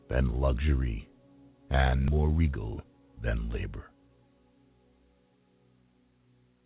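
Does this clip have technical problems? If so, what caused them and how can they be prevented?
Yes. A skip ahead at 2.08 to 2.10 s drops roughly 0.4 s of audio with no fill. The waveform and spectrogram join abruptly, without any silent gap. To prevent it, size the jitter buffer to absorb bursts rather than discarding queued audio.

Jitter buffer speed-up follows from 2.17 to 3.17 s. Repeated removal of pitch periods plays the audio at 113% speed and trims about 150 ms, so it sounds hurried at unchanged pitch. On a spectrogram, the harmonics keep their spacing while events arrive closer together. To prevent it, reduce network jitter or allow the buffer to drain more gradually.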